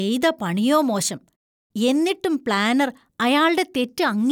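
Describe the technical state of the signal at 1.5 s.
At 1.5 s the signal is intact, with no dropout, distortion, glitch or other audible fault in the speech at that point.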